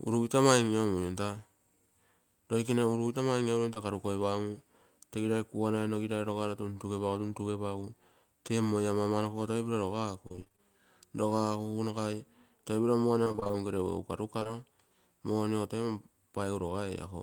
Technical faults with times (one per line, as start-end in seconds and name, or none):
3.73-3.78 short concealed packet loss
10.28-10.60 repeated packet loss (robotic sound)
13.24-13.55 repeated packet loss (robotic sound)
14.39-14.48 short concealed packet loss